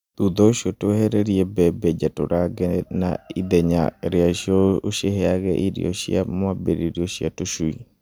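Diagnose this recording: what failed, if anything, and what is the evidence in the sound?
Nothing stood out on listening to this speech recording, and no stage of the chain gives any sign of having failed.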